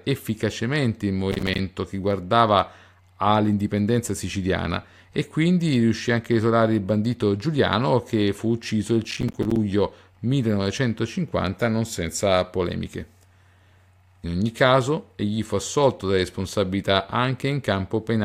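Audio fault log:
1.32 to 1.59 s, processor overload crackle: right after "efficacemente il" and before "che guardava all'indipendenza siciliana", the speech breaks into a quarter-second burst of gritty, rapid crackling. The processor kept missing its deadlines, and each late buffer was replaced by silence, so the signal chops on and off with hard edges. The tearing texture suggests a run of very short buffers, a few milliseconds each, dropping one after another.
9.04 to 9.56 s, processor overload crackle: after "che fu ucciso il", the same crackle returns and lasts about half a second, roughly twice as long as the first burst. The speech is again torn by rapid silent dropouts as buffers miss their deadlines, and it clears once the load passes.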